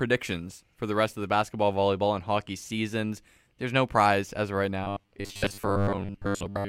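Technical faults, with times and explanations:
4.84 to 6.69 s, robotic sound from repeated short buffers: the speech turns into a stiff metallic buzz at 100 Hz that only loosely follows the words. Likely the playback was starved and kept looping a 10 ms chunk, so most of the real audio got skipped.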